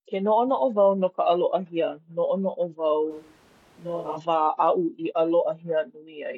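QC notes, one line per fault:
3.12–4.15 s, switch to a distant microphone: the speech suddenly turns roomy and hollow, loses low end and drops roughly 10 dB, with room noise only about 25 dB below it. The close microphone's feed likely dropped out, leaving a far pickup.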